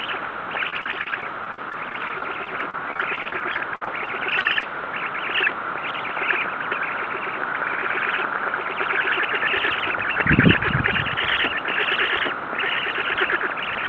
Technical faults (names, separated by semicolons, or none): repeated packet loss (robotic sound)